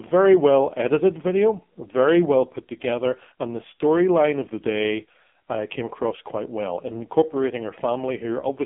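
From start to finish the speech passes through the AMR narrowband mobile codec, and the damage is heavy. Nothing above about 3.7 kHz survives, and the line band runs roughly 150 Hz to 3.5 kHz. What separates this from simple telephone band-limiting is the buzzy, synthetic texture: the vocal-tract model rebuilds each frame from very few pulses, which points to one of the lowest AMR-NB modes, near 6 kbps.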